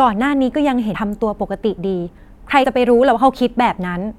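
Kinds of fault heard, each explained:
Compressed frames skipped: the speech lurches forward twice, at 0.93 s and again from 2.63 to 2.65 s. About 100 ms of audio vanishes at the first point and about 50 ms at the second. That fits the decoder dropping roughly four, then two, whole 23.2 ms frames that were missing from the file or rejected as damaged.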